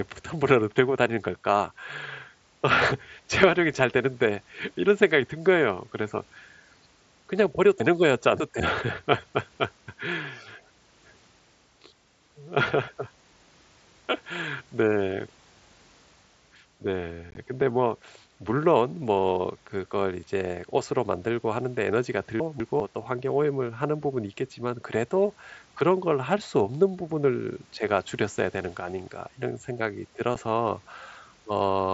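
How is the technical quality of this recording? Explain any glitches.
The recording has two kinds of glitch, chunks out of order and unconcealed Bluetooth headset packet loss, each appearing twice. The speech passes through a wideband mSBC headset link with a bandwidth of 8 kHz and a light grainy texture.

From 7.8 to 8.6 s, and again from 22.4 to 22.8 s, chunks play out of order. Segments of 200 ms arrived late and were placed after material that should follow them. In the first event a chunk plays three positions late; in the second, one position late. Nothing is missing, but the sequence jumps at three hard joins, so the speech sounds briefly jumbled. A waveform shows abrupt discontinuities at 200 ms boundaries, and a spectrogram shows vertical broadband lines where formant tracks break and resume out of sequence.

At 17.31 to 17.37 s, and again at 30.35 s, there is unconcealed Bluetooth headset packet loss. 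Headset frames never reached the phone, and silence or an idle pattern was inserted with no concealment. The first event drops about 37.5 ms scattered across 60 ms, with the longest gap 15 ms, which fits a handful of short frames. It sounds like short holes with abrupt edges in the speech. The second event is a single 7.5 ms hole. A waveform shows flat gaps with sharp edges, and a spectrogram shows thin blank vertical slots.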